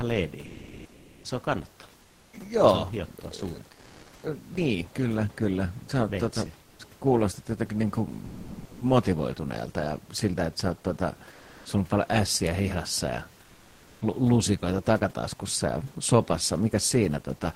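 Comfort noise in place of the background fills the pauses at 0.49–1.21, 2.05–2.29, 3.73–4.21, 6.67–6.79, 8.29–8.77, 11.35–11.65 and 13.45–13.99 s. Likely discontinuous transmission swapped the real room noise, which sits about 31 dB below the speech, for synthetic noise. The level shifts by about −5 to +6 dB, so the spectrogram shows uniform noise blocks that differ from their surroundings. At 6.76–6.79 s the onset is likely clipped by the voice detector, losing 30 ms, so the sound starts abruptly and the waveform rises as a sharp edge without a ramp.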